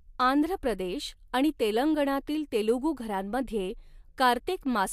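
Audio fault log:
No audible faults detected.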